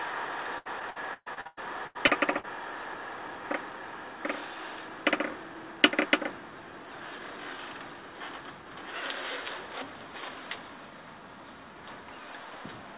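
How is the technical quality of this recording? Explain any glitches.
The main problem is a burst of choppy, broken-up sound near the start, with everything capped at about 4 kHz, which fits a narrowband G.711-style call codec.

From 0.58 to 2.47 s you get repeated packet loss, the robotic-sounding kind. Packets kept dropping or arriving late, around ten gaps in under two seconds, the longest about 125 ms. Each hole got papered over by stretching the last bit of sound, so roughly a third of that stretch is filler. That's why it sounds choppy and stuttery, with chunks missing.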